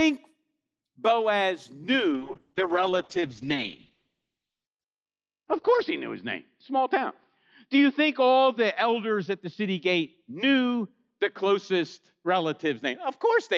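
Speech carried over a call, with Opus coding audible throughout. At 2.14 s a call bitrate drop sets in and lasts to the end. The sound turns rough and muffled. The top of the spectrum falls from about 12 kHz to about 6 kHz. The worst stretch lasts about 3.75 s. That points to the encoder falling from around 32 kbps to around 7 kbps. A shrinking bandwidth estimate forced coarser coding and a narrower band.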